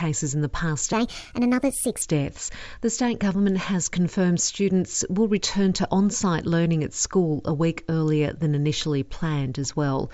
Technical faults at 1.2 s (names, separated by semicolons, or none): wrong sample rate